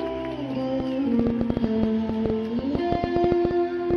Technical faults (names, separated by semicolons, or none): train of clicks